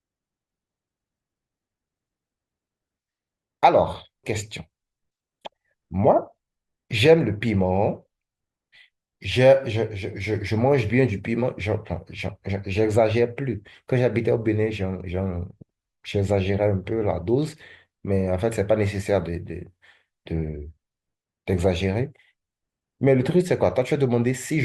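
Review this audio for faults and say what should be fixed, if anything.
At 4.23 to 4.29 s the speech suddenly jumps ahead with a small blip, so a stretch of the talk is simply gone. That's likely a stream segment skipped: one chunk of the segmented stream failed to load and the player just moved on to the next. To prevent it, have the player retry or buffer a failed segment instead of skipping past it.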